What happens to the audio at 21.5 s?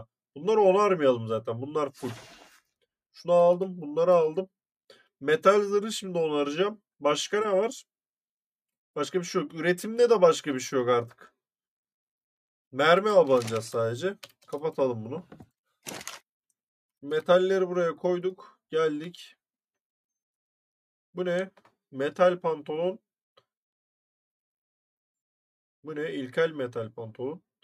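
Nothing goes wrong at 21.5 s: the audio plays through that moment intact, with no fault to be heard.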